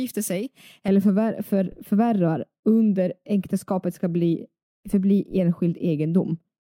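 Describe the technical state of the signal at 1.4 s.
At 1.4 s the speech sits inside a stretch of de-emphasis applied wrongly, running from 0.88 s to 6.73 s. A treble-cutting stage meant to reverse pre-emphasis has acted on a signal that either never had that boost or had it removed already, so the response tilts smoothly downward, reaching about 11 dB less at 10 kHz than at 1 kHz. The result is dull, muffled speech with its crisp high end rolled away.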